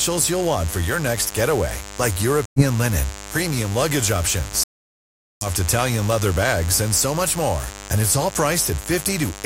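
A mains buzz runs through the whole recording, sitting not far below the speech. It comes from sharp switching spikes, from something like a dimmer, a rectifier or a missing shield, leaking into the signal twice per cycle of the 50 Hz supply. Because the spikes are so abrupt, they produce a dense ladder of 50 Hz harmonics extending well into the kilohertz range, which gives a steady, raspy edge rather than a smooth hum.

At 2.46 s the audio cuts out for about 0.17 s, until 2.63 s, and at 4.64 s a much longer gap of about 0.83 s follows, ending at 5.47 s. Both are likely Bluetooth dropouts, where audio packets arrived at the headphones too late and were discarded, leaving silence. The speech picks up further along on resuming, as though it had kept playing through the gap.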